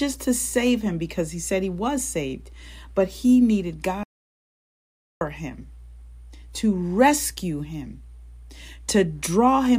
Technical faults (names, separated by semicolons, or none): playback stall